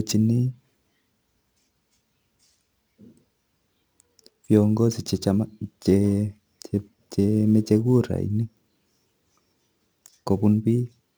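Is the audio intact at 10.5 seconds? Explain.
No. Sample clock jitter runs through the whole clip, including 10.5 s: timing errors of a few microseconds add roughness about 30 dB below the speech, unlike steady hiss, because it vanishes in pauses.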